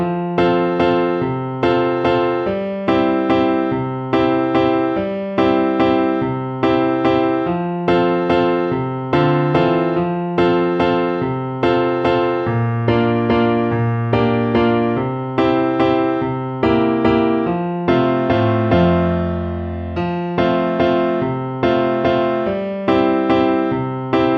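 Nothing goes wrong anywhere in this one, so there's no fault to point to at any moment in the audio.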